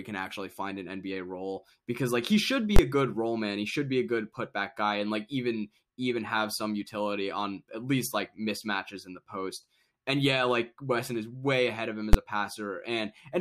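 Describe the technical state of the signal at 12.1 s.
A single sharp bang cuts through the speech at 12.13 s, just after "ahead of him as", lasting only about 12 ms. This is invalid numbers at full scale: a calculation produced infinite or invalid values, which were forced to the largest possible sample value, so the output is pinned flat at one extreme value, far beyond the speech's peaks, for one whole processing block. Its short length fits a 512-sample block, which is why the loud onset and release merge into one bang.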